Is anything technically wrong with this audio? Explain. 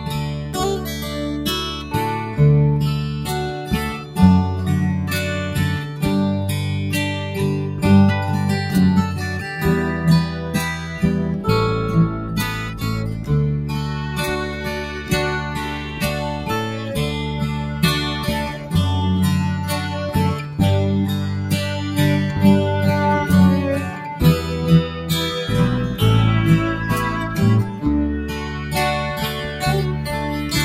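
Yes. Throughout the clip, a noise suppressor built for speech is running on audio it wasn't designed for, treating sustained tones, ambience and decay tails as noise. Attacks pass while held sound is pulled down by around 5 dB, so the level pumps and the body thins out.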